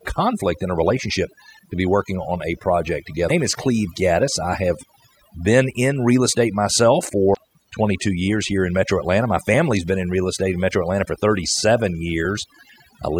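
Overdone noise removal runs through the whole speech clip. The noise reducer was set too strong. It pulls individual frequency bands down whenever they sit near its noise estimate. The background drops and breaks up into twinkling specks.

Damaged data in a compressed stream breaks in twice, from 3.25 to 3.31 s and from 7.30 to 7.37 s. Part of the encoded stream was corrupted there. The decoder misreads those frames and loses sync. Each spot is heard as a brief chirp, squawk, click or short hole.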